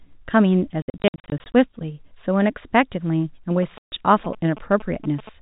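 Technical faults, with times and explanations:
0.82–1.53 s, packet loss filled with silence: The speech breaks into a stutter of hard-edged dead gaps, 20 to 60 ms long, adding up to about half of this stretch. Packets went missing and the receiver played silence in their place. The gap sizes fit 20 ms packets.
3.63–5.29 s, GSM signalling bursts: A galloping dit-dit-dit of short buzzes at 217 Hz sits about 15 dB below the speech. A nearby 2G phone was sending signalling bursts, and the audio circuit rectified the radio energy into sound.
3.78–3.92 s, packet loss filled with silence: A single hard-edged hole of 140 ms cuts into the sound. A run of lost packets was replaced with silence, and the hole's length fits seven 20 ms packets.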